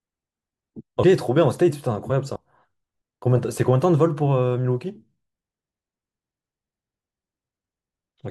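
At 1.02 s and again at 2.35 s, compressed frames are skipped. A handful of whole frames, each consistent with a frame length of about 23 ms, never reach the output, so the speech jumps ahead by roughly a tenth of a second. On the waveform the envelope changes abruptly at each point, and the spectrogram shows a vertical discontinuity where the harmonics and formants shift suddenly instead of gliding.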